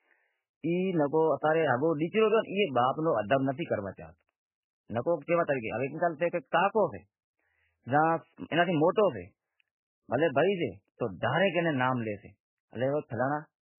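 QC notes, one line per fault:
Throughout, MP3 compression: the speech has nothing above 3 kHz and a heavy watery, swirling texture, with sibilants turned to metallic chirps and consonant onsets smeared. The likely cause is an MP3 encoder starved of bits, which fits a very low rate of around 8 kbps. It cuts the treble at a fixed point and drops weak frequency lines that flicker on and off from frame to frame, so the remaining band sounds unstable and blurred.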